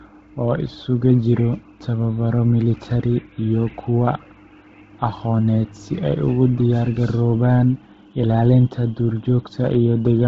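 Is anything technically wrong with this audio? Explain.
Yes, the speech carries heavy Bluetooth LC3 compression damage from start to finish. The sound is grainy and breathy. This is likely LC3 coding at a very low rate, consistent with roughly 16 kbps in 10 ms frames: the encoder discards much of the upper spectrum and substitutes shaped noise. A spectrogram shows a hard ceiling with nothing above about 7.8 kHz, and a blotchy, noise-filled upper band in frame-sized blocks instead of clean harmonic detail.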